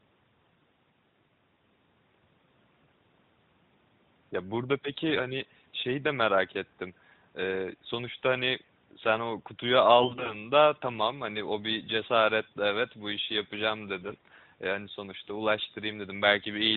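Right after "sen o kutuyu", from 10.00 to 10.34 s, and again after "bu işi yapacağım", 14.02 to 14.18 s, you get AMR bit errors. Roughly 7 percent of the less protected bits arrive flipped, so the pulses and fine gain values scramble and the speech briefly goes hoarse and gargly.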